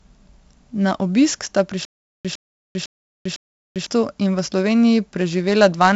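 Heavy 4-bit ADPCM compression runs through the whole clip. Each sample is coded as a coarse step from a prediction. The error rides the signal as gritty hiss, sharp onsets distort, and nothing sounds above 7.7 kHz, which fits a 64 kbps stream.

From 1.85 to 3.87 s there is a stutter with silent gaps. A 107.5 ms fragment repeats four times, every 504 ms, with 396 ms of digital silence between. The likely cause is a stalled stream replaying its last fragment. The missing audio is gone.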